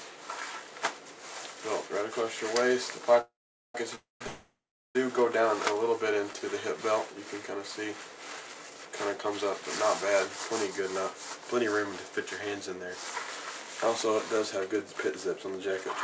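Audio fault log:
3.21–4.96 s, call audio freeze, three times: 3.21–3.75 s, 3.95–4.22 s and 4.27–4.96 s. Each time the sound stalls and the last moment is stretched into a short fading buzz. Then it drops to silence for about 430 ms, 160 ms and 390 ms. The sound resumes where it stopped, so nothing is lost; the clip is pushed later by 534 ms, 252 ms and 683 ms. Packets held up in transit likely left the jitter buffer empty, over a call path that carries nothing above 8 kHz.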